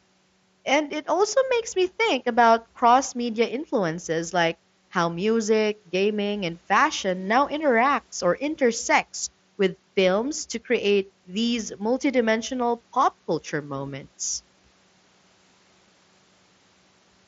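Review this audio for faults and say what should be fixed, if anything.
Nothing here needs fixing. The speech comes through the Bluetooth mSBC headset link with its bandwidth topping out around 8 kHz and a light graininess from the codec that belongs to that path.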